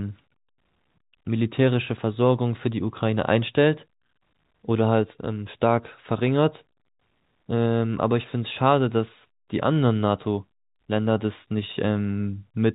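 No technical faults are audible in the speech, which carries the narrow, 4 kHz-limited band of 64 kbps G.711 A-law telephone coding with at most a faint level-following quantisation hiss beneath it.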